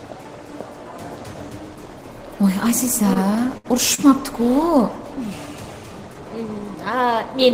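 Short stalls from a late packet occur at 3.13, 3.58 and 3.94 s. Each time, the jitter buffer ran dry and the last sound was stretched for 21, 67 and 38 ms. Playback then resumed where it left off. The held sound carries a slight buzz or dip, longest at 3.58 s.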